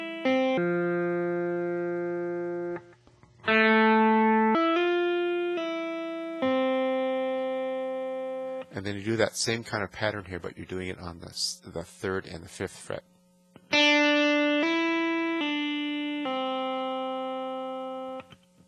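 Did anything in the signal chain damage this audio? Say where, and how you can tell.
Yes, from about 0.58 s to 4.55 s there's a wrong sample rate fault at the playback stage. That stretch drags, running at about two-thirds speed, and everything drops by roughly seven semitones, with speed and pitch falling together. That tie-in is the giveaway. The samples are being clocked out slower than they were captured, with no resampling, which fits 48 kHz material being played at 32 kHz.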